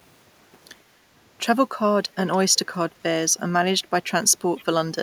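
At 0.88 to 1.05 s there's background gated by the echo canceller. The canceller decided the far-end loudspeaker was active and pulled the microphone gain down to keep echo out, taking the room sound with it. You hear the background dip by about 6 dB, adding up to around a tenth of a second, and then come back when the canceller lets go. It's a short hole in the ambience rather than a full dropout.

Later there are three short scraps of a faint delayed copy of the speech, at 2.32 to 2.38 s, 2.55 to 2.59 s and 4.56 to 4.64 s. Each trails the original by 288 ms and sits roughly 30 dB below it, so it's a quiet ghost rather than an obvious repeat. This is likely an echo leak: the far end's canceller didn't fully remove what its microphone picked up from the loudspeaker, and those leftover fragments got sent back down the line.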